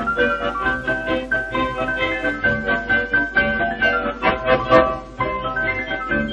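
From 2.35 s to the end, the adaptive stream drops to a lower bitrate: treble vanishes above 8.7 kHz and artefacts thicken, fitting roughly 32 kbit/s, switching abruptly without any gap, unlike a dropout.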